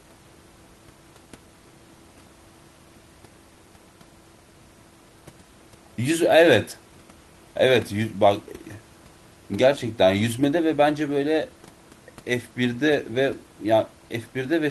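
Speech recording with no technical faults, only the room's own background noise sitting about 32 dB below the voice.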